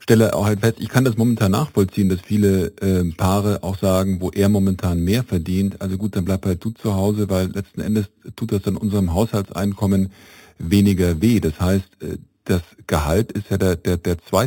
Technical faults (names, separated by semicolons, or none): imaging from sample-and-hold upsampling